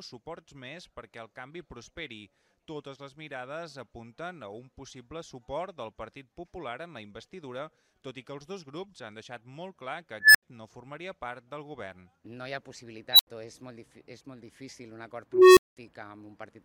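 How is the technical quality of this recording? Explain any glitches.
The recording has three bursts of an unstable filter. At 10.20 to 10.43 s a tone near 1.5 kHz swells over about 146 ms, clips, then drops to 80 ms of silence. At 13.12 to 13.27 s a squeal around 4 kHz builds in 71 ms, followed by 80 ms of silence. At 15.32 to 15.77 s a low tone near 400 Hz grows over 247 ms and is followed by 200 ms of silence. Each time, a recursive filter with bad coefficients feeds its output back until it runs away, overflows, and goes quiet until it resets.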